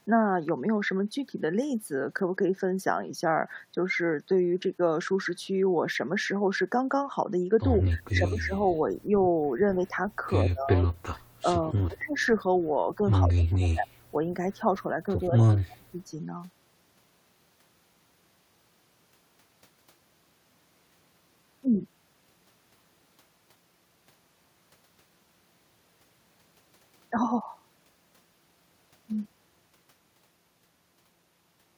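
A speech recording in which the voice dips and drops out in pieces across four stretches: 7.77 to 8.53 s, where it falls by about 20 dB, and then 10.43 to 12.17 s, 12.95 to 14.02 s and 14.74 to 15.94 s, where the deepest drops reach about 30 dB. Within each stretch only part of the time, well under a second to around a second, is affected. This is speech suppressed in double talk, likely caused by an echo canceller that heard this talker over the far side's loudspeaker sound and turned everything down together. Right after the second stretch, from 12.19 to 12.26 s, a short delayed copy of the voice comes back about 131 ms late, roughly 35 dB below the speech. This is an echo leak, likely from loudspeaker sound that a microphone picked up and the echo canceller failed to remove fully before it was sent back.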